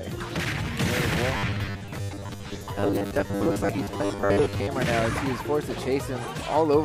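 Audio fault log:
1.37–4.68 s, robotic sound from repeated short buffers: a stiff 100 Hz metallic buzz, likely from roughly half the audio being 10 ms repeats over skipped material.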